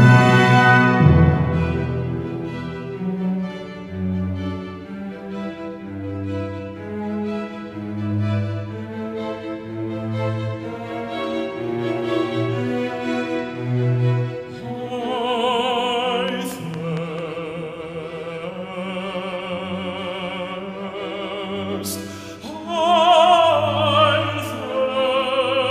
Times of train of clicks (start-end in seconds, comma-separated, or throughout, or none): 16.28-17.20